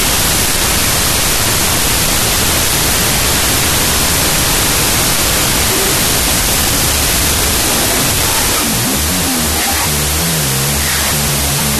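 From start to end, a wrong sample width buries the speech in loud noise. Half speed and lower pitch point to 32-bit float data read as 16-bit integers.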